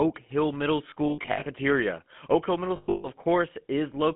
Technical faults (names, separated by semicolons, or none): GSM full-rate codec; lost GSM frames